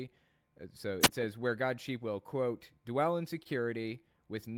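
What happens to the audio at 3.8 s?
A short stall from a late packet, 3.81 to 3.87 s. The jitter buffer ran dry, so a sound is held about 27 ms. Nothing is lost; everything after runs 27 ms late.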